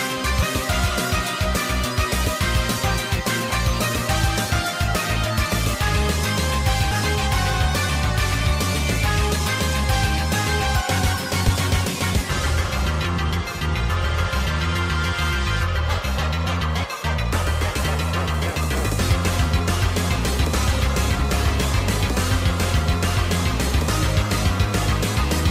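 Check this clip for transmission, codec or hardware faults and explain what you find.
Yes, there's one recurring fault: compressed frames skipped, at 0.42, 3.50, 6.91, 11.48, 13.04, 17.83, 19.09 and 21.19 s. Each time, the audio jumps forward because whole codec frames never got played, either missing from the file or rejected by the decoder as damaged. The jumps range from a few hundredths of a second up to about a fifth of a second, which fits a 10 ms frame size.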